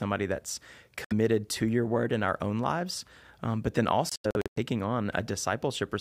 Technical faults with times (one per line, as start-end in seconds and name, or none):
1.04-1.12 Bluetooth dropout
4.09-4.58 Bluetooth dropout